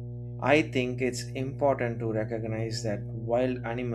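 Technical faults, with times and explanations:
Throughout, mains hum: a steady 60 Hz tone and its low harmonics sit roughly 10 dB below the speech, coupled in from a ground loop or nearby transformer. A spectrogram shows unbroken horizontal lines at the bottom, and the waveform keeps a constant low ripple even in pauses.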